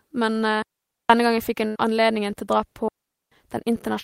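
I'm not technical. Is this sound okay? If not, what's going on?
No. The speech cuts out twice, at 0.62 to 1.10 s and 2.88 to 3.32 s. Each is a clean silence of nearly half a second. These are digital wireless dropouts: the wireless link lost too much data, so the receiver muted.

At 1.67 to 1.78 s there is a burst of packet loss. About 80 ms of audio went missing. The last sound is stretched and faded to fill the gap before the speech resumes.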